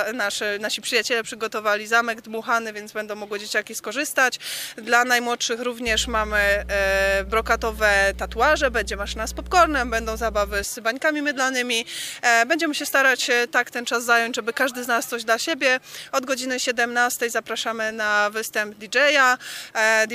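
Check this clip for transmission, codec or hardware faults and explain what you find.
Mains hum runs from 5.87 to 10.64 s: a steady 60 Hz tone, only around 10 dB below the programme, sits under the sound. A ground loop or nearby transformer is coupling the power line into the signal path, giving a low, constant drone.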